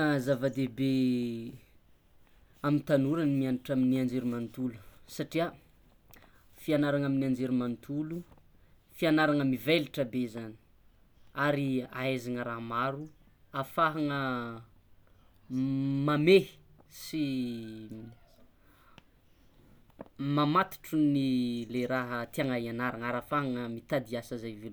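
No technical faults are audible.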